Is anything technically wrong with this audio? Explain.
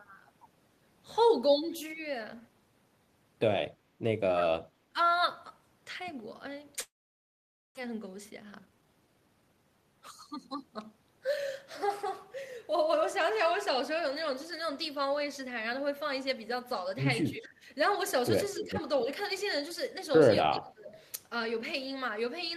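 Yes, there are four kinds of fault in this speech clip.

Speech suppressed in double talk happens four times: 4.33–4.49 s, 17.33–17.67 s, 18.60–18.78 s and 20.44–20.97 s. Each time the talker's level sags. The dip is about 15 dB in the first two, about 10 dB in the third, and a much deeper 30 dB or so at 20.44 s. The likely cause is the far end talking at the same moment. The echo canceller couldn't tell its own talker from the loudspeaker echo, so it ducked everything.

A long network dropout runs from 6.81 to 7.79 s. The last bit of sound gets stretched into a fading buzz, and then there's close to a second of near-silence. When the audio resumes, roughly 0.6 s of material is simply gone. That's most likely packets that never arrived in time, with the receiver's concealment papering over the start of the gap before giving up. The delay also seems to shift by around a third of a second across the gap.

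Jitter buffer speed-up follows straight on, from 7.87 to 9.65 s. The speech runs at about 119% speed with no change in pitch, so it sounds rushed. After the late packets piled in, the receiver was holding too much audio. It trimmed out small pitch-period-sized chunks, about 0.3 s in total, to bring the latency back down.

An echo leak shows up at 18.55–18.68 s. A copy of the voice comes back about 281 ms late, at roughly 10 dB below the speech. That's likely the far side on a loudspeaker, where its echo canceller let some of its mic pickup slip through and sent it back. It overlaps the third double-talk dip, so the two faults tangle together there.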